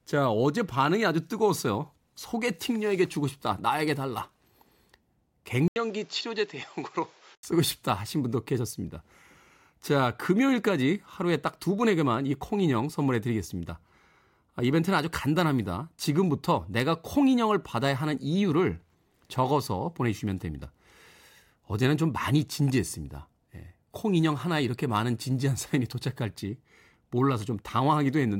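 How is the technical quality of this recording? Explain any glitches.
There's one glitch. From 5.68 to 7.43 s, the speech drops out for about 80 ms and then comes back duller and boxier, with nothing above roughly 7.6 kHz, a few dB quieter, and with a new bed of background noise sitting about 30 dB under the voice. That pattern points to the input likely switching to a poorer device, such as another mic or a headset's call profile, with its narrower band, its own tone and its own noise floor.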